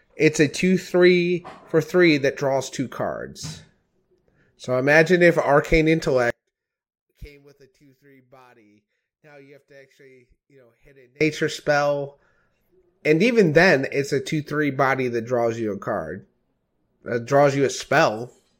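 From 6.30 s to 11.21 s the speech abruptly falls by about 31 dB, shrinking to a faint remnant in which the centred voice and its low end almost disappear, before returning at full strength. The likely cause is one channel inverted. With one side of the stereo pair flipped in polarity, the content shared by both channels cancels when they are summed to mono, and only the small difference between them survives.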